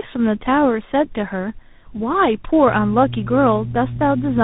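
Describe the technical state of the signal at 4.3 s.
At 4.3 s the call is passing through two speech coders in tandem. The sound appears to have been decoded and re-encoded at each link boundary, and the character points to a GSM full-rate leg followed by a CVSD leg, with a mu-law stage between them. The second coder works on the first coder's already damaged output, so the errors compound. Nothing remains above 3.8 kHz, and the speech sounds rough, muffled and warbly. This tandem speech coding runs through the whole clip.

Mains hum is also present at this moment. It starts at 2.67 s and continues to the end. A ground loop or nearby transformer is coupling the 60 Hz power line into the signal. The result is a steady, low droning tone with some low harmonics, sitting only about 10 dB below the speech.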